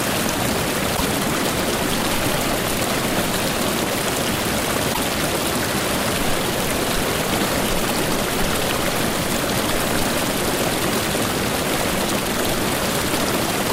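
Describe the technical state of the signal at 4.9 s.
Damaged data in a compressed stream, 4.90 to 4.98 s: the decoder misreads corrupt frames and resyncs, producing a brief glitch, seen as a vertical broadband smear and jagged waveform discontinuity.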